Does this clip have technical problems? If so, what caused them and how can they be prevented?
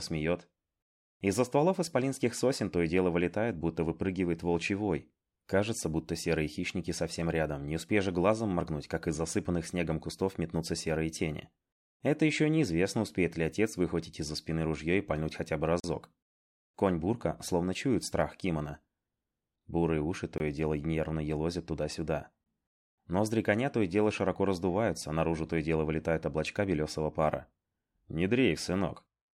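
Yes. There are two blocks of digital silence. The first runs from 15.80 to 15.84 s, a 40 ms hole. The second runs from 20.38 to 20.40 s, lasting 20 ms. Each time, the audio cuts out and returns with no fade. Each gap is long enough to be heard as a short hole. The cause is most likely an output buffer that was not filled in time. Larger buffers and a higher-priority audio thread would prevent it.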